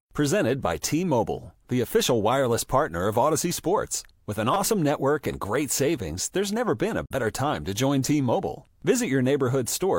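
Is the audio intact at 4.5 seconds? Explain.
No. A repeated buffer fault occurs from 4.54 to 4.56 s in this speech. New audio did not arrive in time, so the device kept replaying the last block it had. That block is only about 5 ms long, and it sounds four extra times. Each repeat starts with a hard join. At this small size the stutter fuses into a brief buzz or click, not a distinct echo. Roughly 20 ms of the real audio is lost.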